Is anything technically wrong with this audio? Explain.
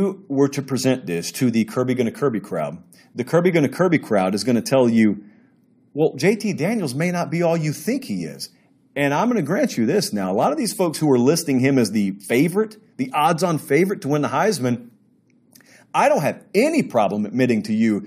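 No, the recording carries its speech without any audible technical fault anywhere in the clip.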